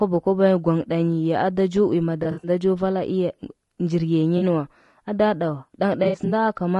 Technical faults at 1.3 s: low-delay AAC compression

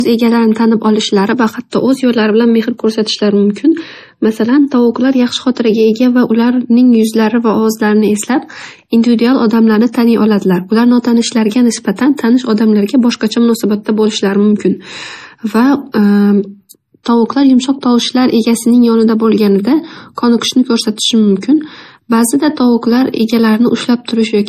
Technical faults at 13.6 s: low-bitrate audio saved at a high bitrate

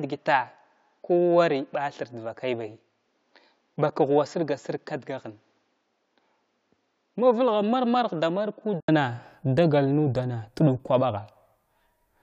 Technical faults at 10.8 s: none

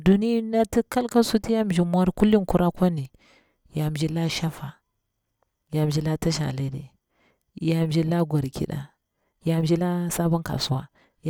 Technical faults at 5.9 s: none

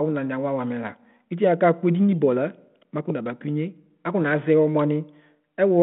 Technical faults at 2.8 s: none

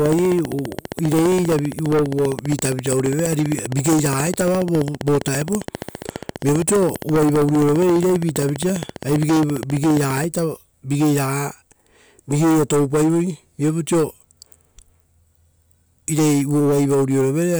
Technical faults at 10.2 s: train of clicks

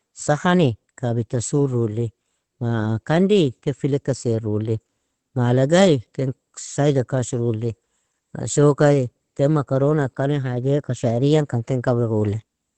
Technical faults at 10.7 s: Opus voice compression

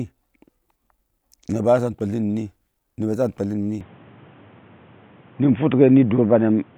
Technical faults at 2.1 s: none

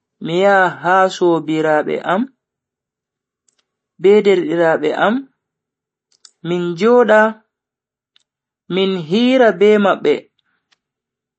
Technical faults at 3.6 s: MP3 compression

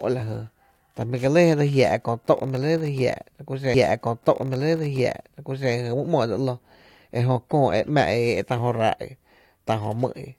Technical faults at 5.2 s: stream segment repeated

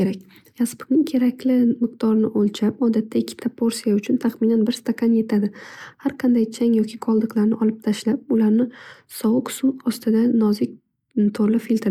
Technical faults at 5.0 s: none

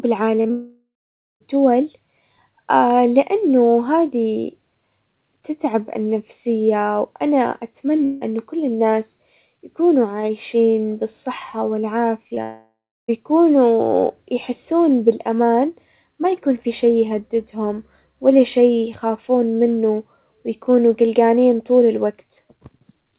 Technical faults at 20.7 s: none

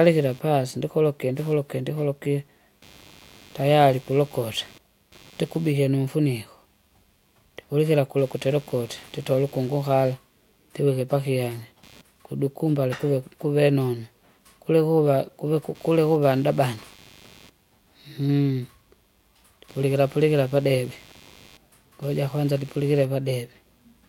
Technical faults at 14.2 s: computer activity noise

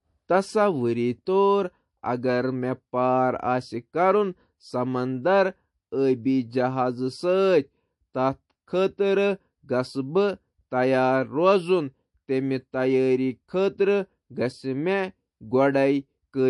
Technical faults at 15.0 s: low-bitrate audio saved at a high bitrate

